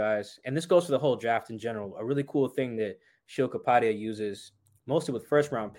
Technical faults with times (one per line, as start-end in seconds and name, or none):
none